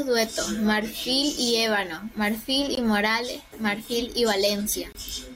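Speech clip with two gaps at a join of encoded pieces, 2.75–2.77 s (20 ms) and 4.93–4.95 s (about 24 ms): untrimmed encoder delay and end-frame padding leave short gaps in the speech.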